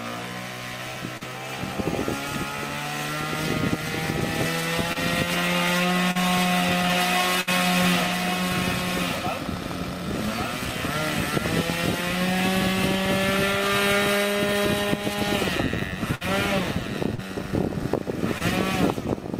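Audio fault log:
1.17–1.23, 4.93–4.97, 6.11–6.17, 17.15–17.20, 18.38–18.42 s: short concealed packet loss. Gaps of 20 to 40 ms were patched by extending the preceding sound, leaving brief smears or wobbles.
6.90–11.30 s: doubled audio track. A second full-band copy, about 5 dB down, trails roughly one second behind and starts and stops abruptly. This is likely a slower duplicate capture path.
7.41–7.49 and 16.15–16.23 s: burst of packet loss. About 60 ms went missing each time. The last sound was held and faded, then playback resumed further on with that stretch gone.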